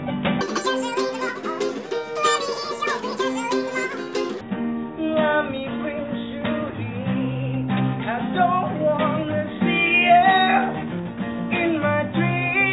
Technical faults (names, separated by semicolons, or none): wrong sample rate